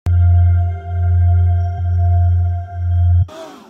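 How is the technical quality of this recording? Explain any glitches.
The recording has two dropouts where compressed frames were skipped. At 1.77 s and again from 3.21 to 3.24 s, whole frames of the compressed stream never reach the output, either because they are missing or because the decoder rejected them as corrupt. Playback leaps forward, losing roughly 200 ms the first time and about 150 ms the second, which points to around ten and seven frames.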